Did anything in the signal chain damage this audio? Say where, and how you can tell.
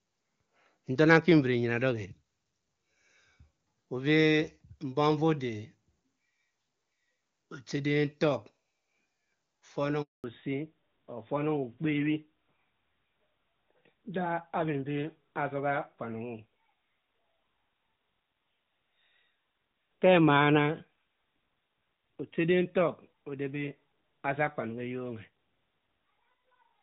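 Yes. At the network stage, a handover gap cuts the speech at 10.02 s: the call switched links and no speech frames arrived for about 220 ms. The sound dies away quickly and stays silent until 10.24 s, and whatever was said in that span is lost.

Immediately after the handover, from 10.24 s to the end, the call shows a fallback to narrowband at the codec stage. Before it, the audio has the full HD Voice band, consistent with AMR-WB at its top rate. Afterwards, nothing remains above 4 kHz, which points to AMR-NB at 12.2 kbit/s, and the speech turns duller and rougher.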